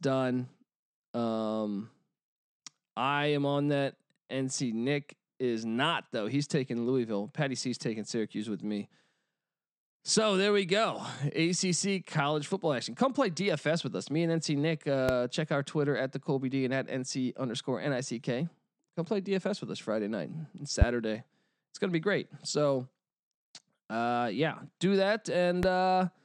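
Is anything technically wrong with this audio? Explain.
Yes. Three loud pops occur: 15.09–15.12 s, just before "check our"; 20.82–20.84 s, after "night and"; and 25.63–25.66 s. Each is one sharp click, roughly 15 to 20 dB above the speech, which continues beneath. A sudden voltage spike is the likely cause.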